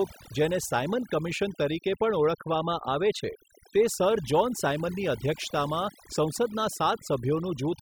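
Overdone noise removal runs through the whole speech clip. The noise reduction was set too hard. Frequency bands near the noise estimate get pulled down or cut entirely. Quiet voice detail goes too. The background drops and breaks up into twinkling specks.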